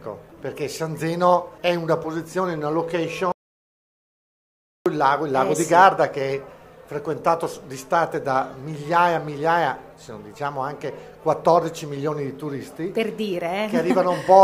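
At 3.32 s the sound cuts off abruptly and the clip falls into total silence, with no room tone or background hiss beneath it, until it resumes mid-flow at 4.86 s. This is an audio dropout to silence lasting about 1.54 s, and whatever occurred in that span is lost. The likely cause is a brief loss of the input signal, such as a disconnected device, a failed link or an accidental mute, while recording continued and wrote silence.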